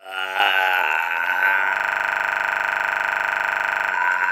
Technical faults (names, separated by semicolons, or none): system hang loop